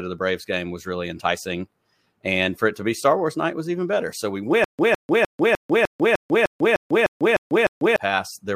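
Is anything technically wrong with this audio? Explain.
Yes. Stutter with silent gaps runs from 4.64 to 7.96 s. The stream likely stalled, and each retry replayed the same 158 ms fragment before running empty. That burst repeats 11 times, every 302 ms, with 145 ms of digital silence between, and the speech for that stretch is lost.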